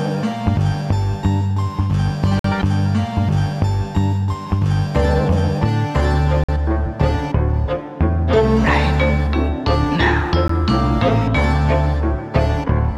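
At 2.39 to 2.44 s, 6.44 to 6.49 s and 10.48 s, the sound drops into hard-edged silence. These are gaps between stream segments, about 50, 48 and 15 ms long, repeating every 4 s. Segment timestamps leave holes, and playback fills them with silence. Nothing is lost.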